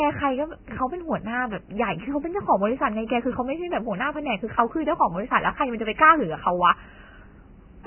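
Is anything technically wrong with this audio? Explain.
Yes. Throughout the speech the sound is hissy and grainy, with nothing above about 3.1 kHz, so the top end is dull and muffled while what remains is rough and smeared at the consonant onsets. This is likely Vorbis compression at a very low bitrate, around 10 kbps. The encoder cut the treble off entirely and quantised the remaining detail so coarsely that it turned into noise of similar energy, roughening tones and blurring attacks.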